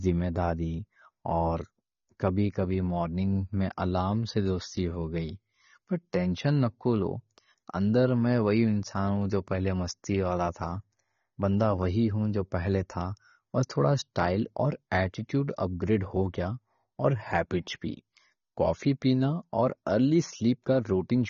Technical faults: AAC compression

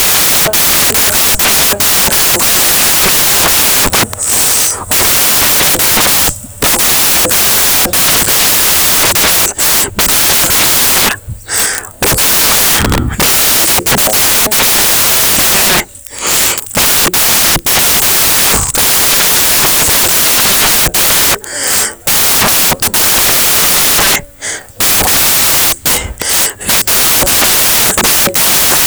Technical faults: samples built from the wrong bytes

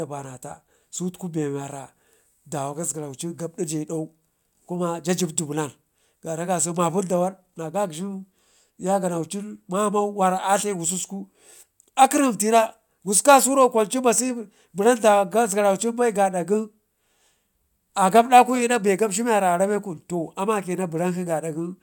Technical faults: none

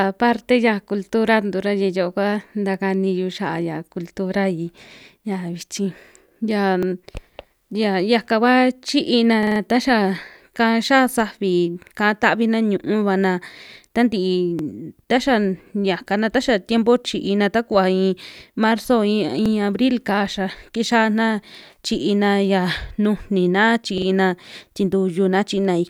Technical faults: repeated buffer

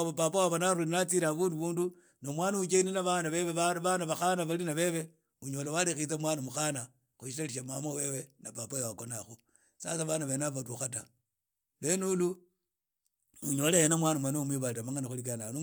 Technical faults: none

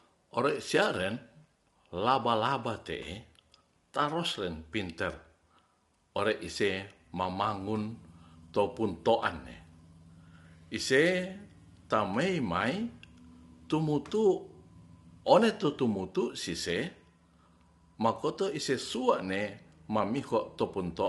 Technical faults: low-delay AAC compression

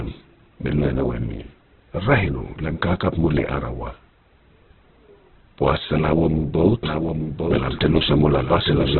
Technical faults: Opus compression; doubled audio track

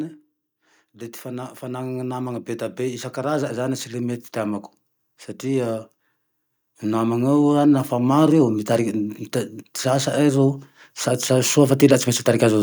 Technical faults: automatic gain rising

